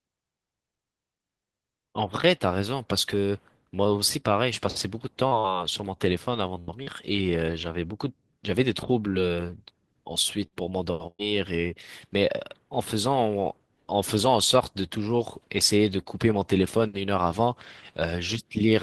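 At 5.27 to 5.34 s and again at 5.39 to 5.47 s, short concealed packet loss leaves two quick smears. In each, about 40 ms of audio arrived too late, and the receiver extended the preceding sound before blending back. Nothing is skipped, which is what separates these from a burst.

At 6.60 to 6.71 s a burst of packet loss hides about 80 ms behind a held, fading continuation. Playback then jumps ahead, dropping roughly 13 ms outright.

A further short concealed packet loss at 6.83 to 6.89 s produces another brief wobble, about 40 ms long.

Bursts of packet loss return at 10.46 to 10.54 s, covering about 40 ms, and at 11.07 to 11.22 s, where about 120 ms is lost. In that longest gap the concealment decays into about 40 ms of silence before the audio resumes.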